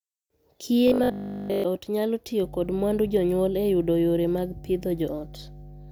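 Robotic sound from repeated short buffers runs from 0.88 to 1.64 s. The speech collapses into a rigid, metallic 50 Hz buzz across that whole stretch, likely because audio arrived too late and the last 20 ms was looped in place of the missing signal.

Mains hum begins at 2.43 s and continues to the end of the clip. Power-line interference, probably through a ground loop or nearby transformer, adds a steady 50 Hz tone sitting roughly 20 dB below the speech.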